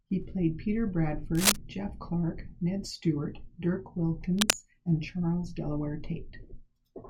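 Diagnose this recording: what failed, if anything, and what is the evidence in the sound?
Cable scratch noise at 1.35–1.56 s and 4.39–4.54 s: brief bursts of dense, uneven crackle ride over the speech, roughly 5 dB above it. This points to the analogue wiring stage, likely a worn cable or connector shifting and rapidly changing its contact resistance.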